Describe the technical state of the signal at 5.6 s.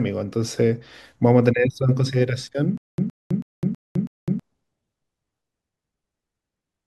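At 5.6 s the speech signal is intact, with no audible dropout, distortion, glitch or other technical fault.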